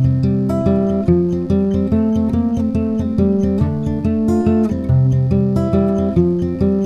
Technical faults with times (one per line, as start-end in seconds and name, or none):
0.00-6.85 mains buzz